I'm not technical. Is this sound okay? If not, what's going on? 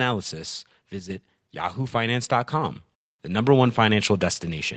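No. From 0.05 to 0.69 s there is automatic gain falling: the level control judged the input too loud and pulled the volume down step by step. The speech and the background behind it sink together, so the start sounds slightly louder than what follows.

Between 1.00 and 1.10 s the sound briefly drops in level, then comes straight back. This is likely one channel dropping out: one side of the stereo signal went missing for that tenth of a second, so everything shared by both sides got quieter at once.

From 1.75 to 4.21 s there is automatic gain rising: the level control now judged the input too quiet and turned it up gradually. Over more than two seconds the speech and its background swell together, ending clearly louder than before. The call-style microphone processing, which leaves nothing above 8 kHz, is normal here.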